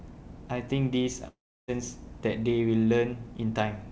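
At 1.28 s the speech breaks off until 1.70 s, likely a long network dropout. The last sound smears into a fading buzz or hiss, then about 0.32 s of silence. Unlike a brief packet-loss glitch, concealment runs out, and unlike a stall, the lost 0.4 s never returns.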